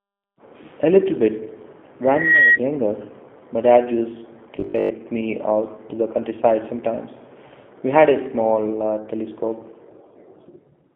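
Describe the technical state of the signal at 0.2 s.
At 0.2 s you're already hearing the G.729 codec, which runs through the whole clip. It rebuilds the speech from a vocal tract filter, a pitch predictor and a few pulses per frame, so it sounds plainly rough and synthetic. Nothing gets above 3.5 kHz, which fits an 8 kbit/s phone line.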